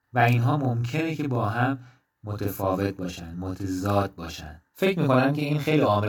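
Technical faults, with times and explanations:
Throughout, channel delay (doubling): the speech is heard twice, a second copy trailing the first by 40 ms at the same level, giving a doubled, slapback quality. One channel arrives late by a long buffer, and summing both channels to mono exposes the offset copy.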